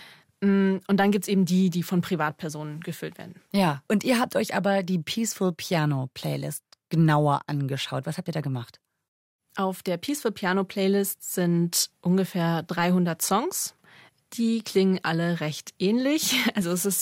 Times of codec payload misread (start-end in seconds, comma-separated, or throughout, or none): none